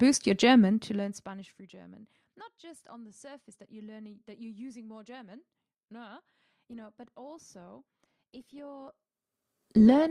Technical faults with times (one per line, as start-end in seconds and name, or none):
6.67-10.10 adaptive stream at a lower bitrate